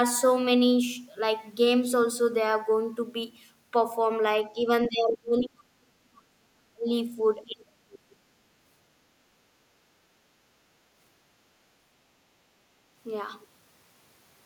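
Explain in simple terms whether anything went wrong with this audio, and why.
Several things go wrong in this speech clip. The talker's voice is cut back at four points: a brief dip at 4.55 to 4.65 s, a deep loss from 4.88 to 6.9 s, another from 7.45 to 8.2 s, and a short cut at 10.28 to 10.36 s. This is likely speech suppressed in double talk. Both ends talked at once, and the echo canceller muted the talker along with the echo.

At 5.39 to 5.43 s, a faint scrap of a second voice slips in, well below the talker. This is likely the other side's voice leaking through. The loudspeaker's sound reached the microphone, and the canceller missed a piece of it.

From 10.64 to 10.93 s, the room sound behind the talker briefly sinks, then comes back. This is background gated by the echo canceller. The canceller pulled the microphone down while the loudspeaker played, then let go.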